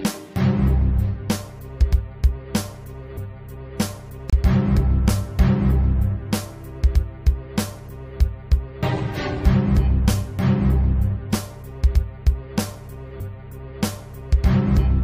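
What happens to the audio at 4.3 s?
At 4.30 to 4.33 s there is a gap between stream segments: two segments' timestamps leave a hole of about 29 ms that the player fills with silence. Unlike a dropout, nothing is lost; the sound stops abruptly and resumes exactly where it left off.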